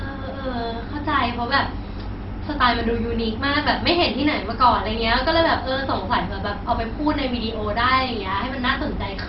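Throughout the speech, the sound is dull and gurgling, with nothing above 5.6 kHz and a coarse, granular texture. That points to heavy MP2 compression, likely at a rate near 32 kbps, where upper sub-bands are dropped and the remaining bands are quantised crudely.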